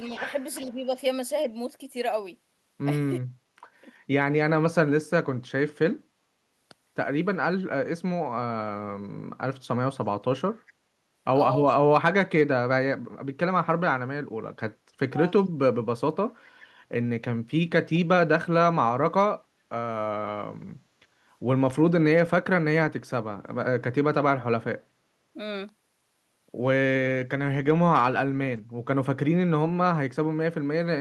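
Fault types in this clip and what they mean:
Echo leak: A loudspeaker echo likely slipped past the other end's echo canceller, so faint, brief copies of the speech return about 389 ms late, roughly 25 to 30 dB down.
Speech suppressed in double talk: The echo canceller likely mistook overlapping talk for echo and turned it down, so the speech briefly dips or cuts out, at worst by about 35 dB.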